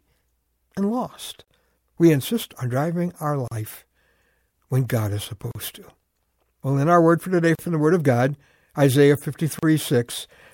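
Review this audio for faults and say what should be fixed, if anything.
Gaps at joins of encoded pieces open at 1.44, 3.48, 5.51, 7.55 and 9.59 s, about 32 to 38 ms each, every 2.0 s: silence left by encoder start delay and last-frame padding. Unlike a dropout, the speech resumes exactly where it stopped. Trimming each piece's encoder delay and padding before joining, or encoding gaplessly, prevents it.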